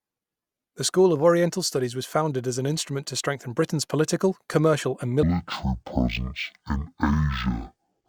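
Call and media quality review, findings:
Stereo read as mono, 5.23 to 8.09 s. Speech drops to half speed, a full octave low. Probably a channel-config mismatch at the decoder: interleaved left/right samples read out as one channel, stretching playback 2x. Faint mirrored image in the upper spectrum too.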